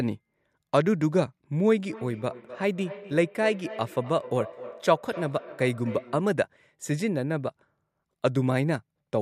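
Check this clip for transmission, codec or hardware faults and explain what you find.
One fault is present: from 1.89 to 6.43 s, feedback echo between two devices. Speech returns roughly every third of a second, up to about 15 dB below the speech. Unlike room reverberation, the repeats are discrete and evenly spaced.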